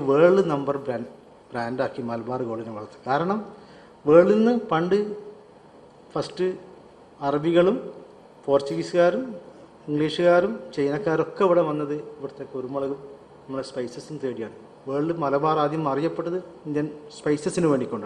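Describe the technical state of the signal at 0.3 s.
Nothing is wrong with the signal at 0.3 s; it is intact at that point, with no audible fault present.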